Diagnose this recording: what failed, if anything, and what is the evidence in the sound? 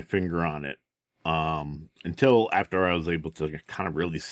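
Nothing stood out on listening to this speech, which comes through with the upper limit of about 8 kHz expected from a call's microphone processing and codec.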